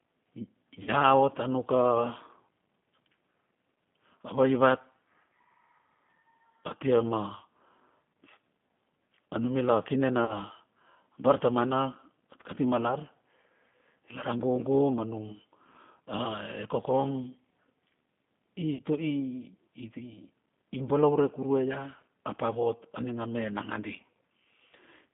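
Speech carried over a G.729 codec, band-limited to about 150 Hz to 3.5 kHz, with a rough, synthetic quality beyond plain telephone filtering that fits an 8 kbit/s model-based coder. Packet loss concealed by the speech codec occurs at 0.83–0.90 s, 10.25–10.38 s and 18.75–18.81 s, each gap about 40 ms, consistent with two lost packets. Rather than dropping to silence, the sound smears into a fading buzzy tone or coloured noise.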